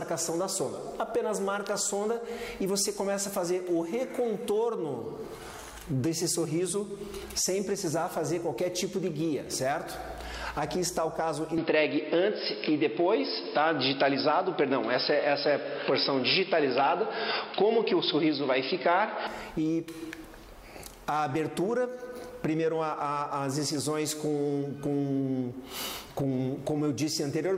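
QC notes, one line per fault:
11.58 to 19.27 s, input switched to a poorer device: the sound abruptly turns dull and boxy, with nothing above 5.2 kHz, shifts in level by a few decibels, and carries a new background noise sitting roughly 30 dB under the signal, then opens up again at 19.27 s. The likely cause is the recording path jumping to a narrower-band microphone or headset profile and back, with no gap at either switch.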